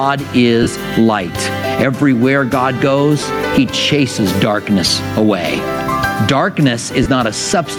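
Gain pumping runs through the whole clip. The most likely cause is an input gain set far too high, with a fast limiter or compressor clamping it on every loud moment. The gain swings by roughly 15 dB. Loud and soft passages sit squashed close together in level.

Lost LE Audio frames break up the sound four times. At 0.63 s, about 38 ms goes missing, which fits five 7.5 ms frames. At 3.20 s and again at 7.03 s, roughly 23 ms drops, consistent with three frames each time. Around 5.52 s, about 38 ms is lost in pieces scattered over 60 ms, with the longest run around 20 ms. In each gap the LC3 decoder repeats the last spectrum with randomised signs, so tonal content smears into a brief noisy hiss. The light lossy compression underneath adds no separate fault.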